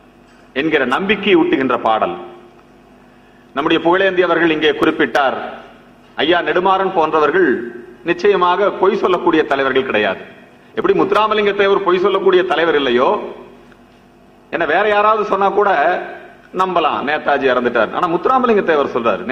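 Brief skips at 4.83 s and 10.82 s, about 6 s apart, are overlap between stream segments, where the player trims a few milliseconds of audio at each segment boundary.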